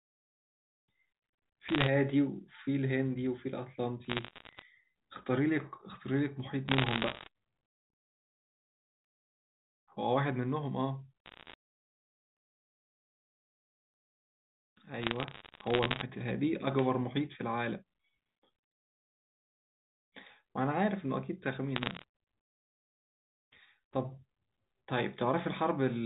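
Speech over a G.711 telephone line carries bursts of bit errors at 1.68–1.88 s, 4.05–4.62 s, 6.68–7.28 s, 11.26–11.54 s, 15.02–16.02 s and 21.76–22.04 s, each flipped bit corrupting a single sample, with hits on high bits giving sharp ticks and crackle, with roughly one bit in a hundred or fewer hit. These show as isolated vertical spikes in the waveform and thin full-band streaks on a spectrogram, all capped by the line's 4 kHz ceiling.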